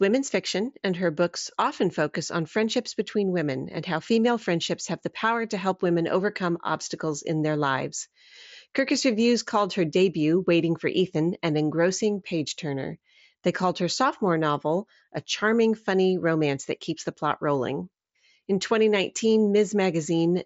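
No technical faults can be heard in the speech, which carries the band-limited sound of a Bluetooth mSBC headset link, reaching up to 8 kHz with only the light graininess on louder moments that this codec leaves behind.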